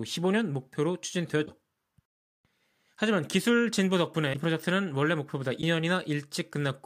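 Speech clip with a likely broken MP3 bit reservoir at 1.45–1.48, 4.33–4.35 and 5.61–5.63 s: after missing frames, the next frame reads stray bytes, producing a glitch about one 26 ms frame long.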